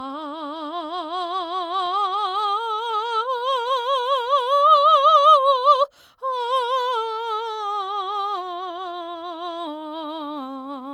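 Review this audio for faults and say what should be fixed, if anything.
Scattered short gaps from 1.85 to 3.72 s: about ten lost packets, none longer than roughly 15 ms, each patched by extending the preceding sound. On a spectrogram these show as brief smeared vertical slivers. Better packet-loss resilience, such as forward error correction, would prevent them.

Jitter buffer slow-down from 3.82 to 6.30 s: the buffer repeated pitch periods to rebuild its reserve, adding 167 ms and playing the music at 94% speed with the pitch unchanged. A waveform shows duplicated cycles stretching sustained passages. A steadier network path or gentler target-delay changes would prevent it.

Jitter buffer speed-up from 8.26 to 9.90 s: the buffer trimmed pitch periods to shed excess delay, removing roughly 150 ms, so the music rushes at 109% speed. The spectrogram looks horizontally compressed. Smoothing bursty packet delivery would prevent it.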